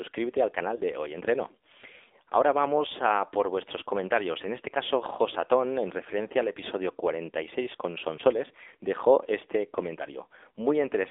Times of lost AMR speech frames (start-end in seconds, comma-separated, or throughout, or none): 0.76-0.81, 8.16-8.21